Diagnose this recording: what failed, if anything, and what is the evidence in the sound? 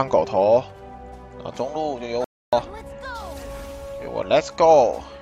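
A playback stall at the playback stage: the sound cuts off abruptly at 2.24 s and stays silent until 2.53 s, a gap of about 284 ms, before the audio returns. On a waveform this shows as a flat line with hard edges on both sides; on a spectrogram, a clean vertical band of empty energy across all frequencies. The likely mechanism is the player's buffer running dry or its output thread being blocked.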